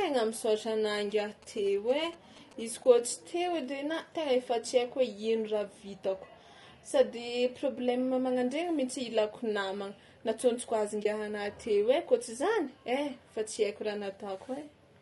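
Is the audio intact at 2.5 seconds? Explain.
No. From 0.95 to 2.99 s, just after "misaotra anà", a nearby 2G phone's signalling bursts are rectified by the audio circuit, adding GSM signalling bursts: a galloping dit-dit-dit of short 217 Hz buzzes at about 20 dB below the speech. Low-delay AAC compression, likely AAC-ELD at a low bitrate around 32 kbps, codes about 500 frequency lines a frame with a low-delay window, leaving the voice rough and grainy, with noise between harmonics.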